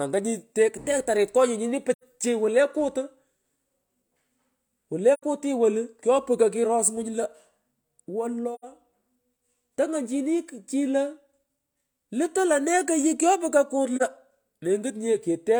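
AAC frame loss with muting interrupts this speech clip four times: at 1.94 to 2.04 s, at 5.13 to 5.23 s (just before "kuti wolu kyoputyo kuros"), at 8.54 to 8.64 s, and at 13.96 to 14.02 s. The first three are soft-edged holes of about 85 ms and the last is a brief dip of 43 ms, which fits two lost frames and one. The decoder zeroes the missing spectrum, and the overlapping windows fade the sound out and back in.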